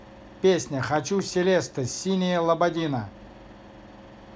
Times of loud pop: 0.96-1.21

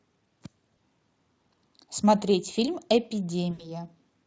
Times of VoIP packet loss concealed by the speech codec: 0.77, 3.51-3.72

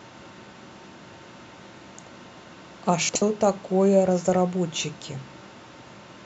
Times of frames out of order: 3.09-3.22

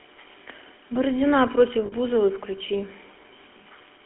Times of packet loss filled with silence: none

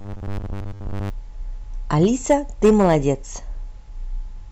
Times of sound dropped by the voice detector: none

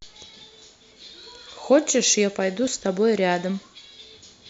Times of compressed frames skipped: 0.92, 2.67

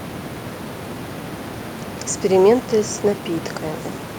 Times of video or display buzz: none

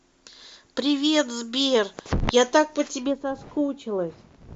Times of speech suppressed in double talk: none

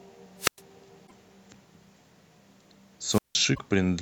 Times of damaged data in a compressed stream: 1.03-1.12, 3.51-3.59

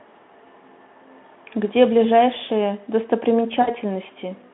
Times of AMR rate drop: none

